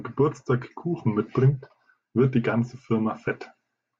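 No technical faults can be heard anywhere in this recording.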